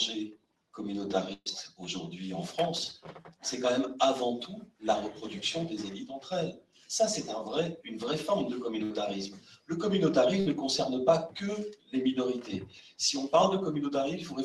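A speech-tuned noise suppressor is running over non-speech sound throughout, treating its sustained parts and tails as noise, so the level swings by around 10 dB and held material pumps and thins while attacks pass. At 0.29–0.74 s, 3.15–3.44 s, 4.64–4.83 s, 6.52–6.89 s, 9.32–9.70 s, 11.73–11.94 s and 12.61–12.99 s, the sound is cut by the noise suppressor, dipping by about 16 to 18 dB as steady or decaying content is pulled down. Three bursts of packet loss occur at 1.33–1.49 s, 8.84–8.93 s and 10.40–10.49 s. In each, the receiver extends the preceding sound and fades it, then resumes further on with about 120 ms, 60 ms and 60 ms missing; the first burst also ends in roughly 30 ms of silence. The call codec limits the band to about 12 kHz.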